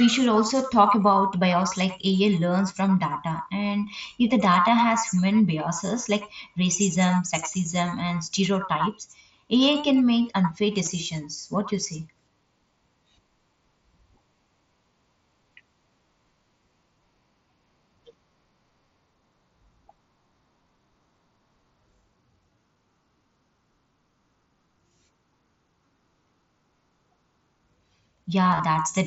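At 10.86 s there is a brief concealed Bluetooth headset packet loss. About 15 ms of audio between headset and phone goes missing, and the receiver patches it with a matching stretch of the preceding waveform. From 28.52 to 28.60 s the losses recur, about 45 ms in total scattered over 75 ms, with no single gap longer than 15 ms. The repeated fills give a short buzzy, slightly warbling patch within the mSBC wideband sound.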